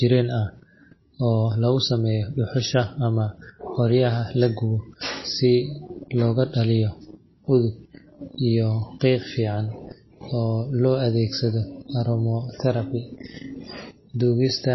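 MP3 compression runs from start to finish, and the damage is plainly audible. Nothing above 5.8 kHz survives, so the speech sounds dull, with sibilants blunted and a watery, swirling texture. The likely cause is an MP3 encoder starved of bits, which fits a rate of about 24 kbps. It chops off the treble and lets weak frequency components blink in and out between frames, and consonant onsets smear.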